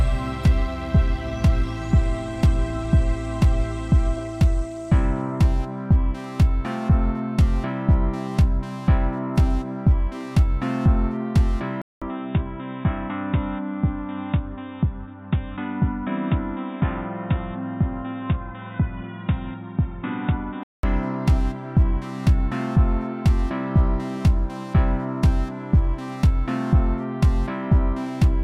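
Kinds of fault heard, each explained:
Input switched to a poorer device: the recording likely moved to a narrower-band input. After a 200 ms gap the sound turns dull, cut off above 3.8 kHz and about 5 dB quieter.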